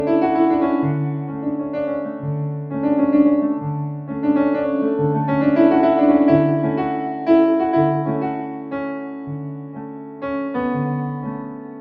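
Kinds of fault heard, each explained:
Noise suppressor applied to music or sounds: A suppressor built for speech stays active across the whole clip, treating sustained and ambient parts of the sound as noise to be removed. Its gain keeps rising and falling by around 10 dB, so the level pumps: onsets come through at near full strength while held portions and decays are pulled down. Throughout, the sound seems to breathe and thin out rather than sit at a steady level.
Sound cut by the noise suppressor: At 1.27–1.75, 2.03–2.24, 8.35–8.74, 8.92–9.29, 9.52–10.23 and 11.38–11.8 s the suppressor clamps down harder on particular stretches it has classed as noise. The dips reach about 5 dB in the first two and about 6 dB in the later four. Sustained or fading material there sinks in level or has its tail shortened, while abrupt transients within those spans pass largely intact.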